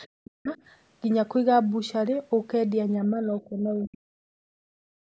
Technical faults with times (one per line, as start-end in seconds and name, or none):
0.21-0.50 speech suppressed in double talk
3.05-5.16 speech suppressed in double talk